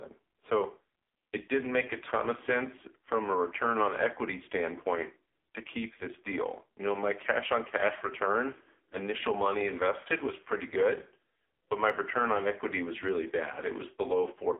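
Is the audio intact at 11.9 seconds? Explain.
No. At 11.90 s, between "pretty good but my" and "return on equity was", there is a single sharp click. It is the sound of dropped samples: likely a couple of samples went missing, so the waveform leaps straight from one value to a later one. The gap lasts a tiny fraction of a millisecond, far too short to remove any sound, but the discontinuity shows as a one-sample step in the waveform and as a thin vertical line running up the spectrogram.

That moment also carries the AMR narrowband mobile codec damage present across the whole clip. The speech is coded as a vocal-tract model driven by a few pulses per frame, and the heavy buzzy, synthetic quality points to a low AMR-NB mode, around 5.15 kbps. The line band runs from 250 Hz to 3.5 kHz, and nothing reaches above 4 kHz. On a spectrogram this appears as an empty region above that ceiling.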